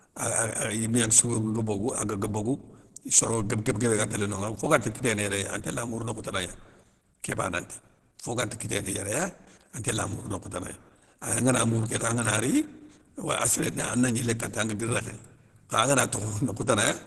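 Throughout the speech, the sound is muffled, hoarse and grainy, with nothing above about 12.1 kHz, heavy damage likely from Opus compression at a low rate in its hybrid speech mode.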